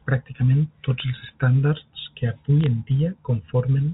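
Speech over a G.711 telephone line, band-limited below 4 kHz, carries bit errors on a digital phone line: a brief hit at 1.0 s and a brief cluster of crackle from 2.64 to 2.66 s. Each tick is one corrupted sample, not a gap or dropout like packet loss.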